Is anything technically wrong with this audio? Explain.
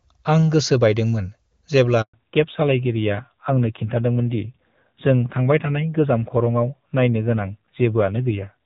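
Yes. At 2.02 s the speech drops into silence for 120 ms until 2.14 s. This is a handover gap: the call switched networks and no speech frames arrived during the changeover.

From 2.14 s to the end, the speech sounds duller and rougher, with nothing above 4 kHz. This is a fallback to narrowband: the call left the crisper wideband coding heard earlier, which fits AMR-NB at about 7.4 kbit/s.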